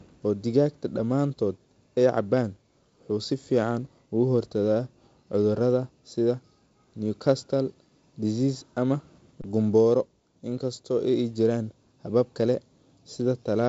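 Underrun with held sample at 9.42 to 9.44 s in this speech recording. The output buffer ran dry for about 23 ms, a gap of 1024 samples, and the converter held its last value, so the waveform goes flat. Roughly 20 ms of live audio was lost. The band-limited wideband telephone sound, with nothing above 7.7 kHz, comes from the G.722 coding.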